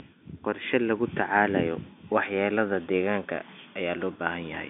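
Nothing's technically wrong with this speech clip: it's ordinary telephone-band audio in G.711 mu-law, with the content tapering off around 3.7 kHz as that line format normally does.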